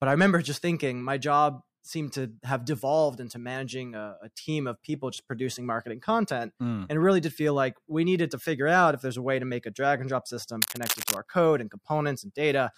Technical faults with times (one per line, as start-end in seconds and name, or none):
10.62-11.17 cable scratch noise